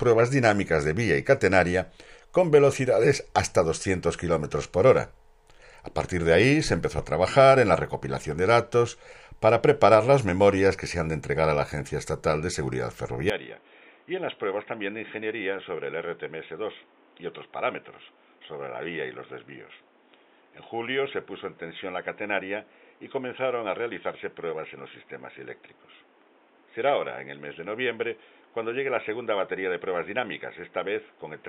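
At 13.30 s the audio turns dull and boxy and stays that way to the end. Nothing is left above 3.8 kHz. The level drops by roughly 10 dB, with no gap at the change. A new noise floor appears, roughly 30 dB below the signal. The likely cause is an input switched to a poorer device partway through.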